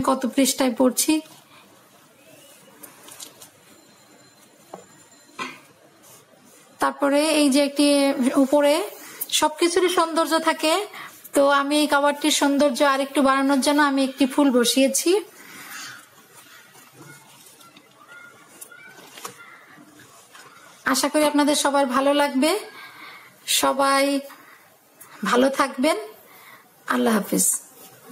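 Gain pumping runs through the whole clip. The level never settles. Each loud sound makes the gain drop. The swing is around 10 dB. Loud and quiet passages sit close together, and the sound feels squashed. The likely cause is input gain set far too high, with a fast limiter or compressor clamping every peak.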